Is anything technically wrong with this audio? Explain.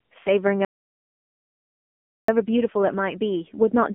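Yes, two faults. Throughout, the speech carries the AMR narrowband mobile codec: nothing above 3.7 kHz, a 200 Hz to 3.5 kHz line band, and heavily buzzy, synthetic vocal-tract modelling that fits a low mode around 6.7 kbps. The buzz separates it from plain low-pass filtering. From 0.65 to 2.28 s there is an audio dropout to silence lasting about 1.63 s. It is silent with no room tone, which sets it apart from a fade or a noise gate. The likely cause is lost input, with the encoder writing silence.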